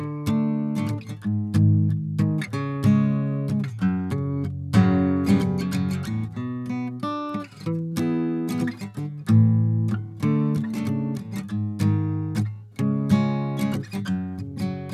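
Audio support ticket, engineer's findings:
No faults found on listening to the music clip. No component flagged and no fix applied.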